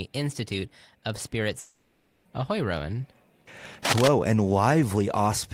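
From 1.59 to 2.27 s, a likely long network dropout: about 0.66 s of speech is replaced by a fading buzz or hiss, a smeared band on the spectrogram. At 3.85 to 4.08 s, cable scratch noise, likely from a worn contact, is roughly as loud as the speech and shows as jagged broadband spikes on the waveform.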